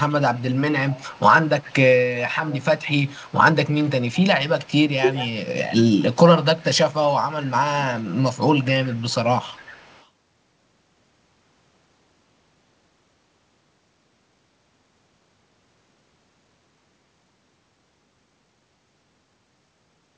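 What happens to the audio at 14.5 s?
Nothing goes wrong at 14.5 s: the speech carries on intact, with only the steady wideband call-codec sound, nothing above 8 kHz, that runs through the whole recording.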